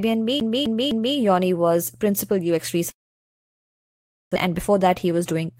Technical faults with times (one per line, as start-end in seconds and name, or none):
0.40-1.17 CD stuck on one turn
2.90-4.38 long network dropout
4.45-5.60 jitter buffer speed-up